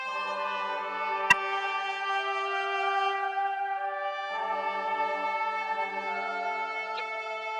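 At 1.30 s the music breaks into a short, loud chirp lasting to 1.34 s. This is a corrupt frame decoded: damaged bits were played anyway. A quieter blip follows at 6.95 to 7.00 s, roughly 15 dB lower, misplacing energy in frequency.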